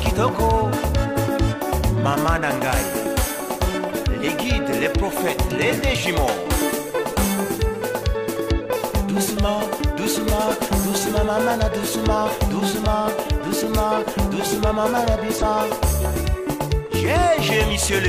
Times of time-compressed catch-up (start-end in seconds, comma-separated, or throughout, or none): none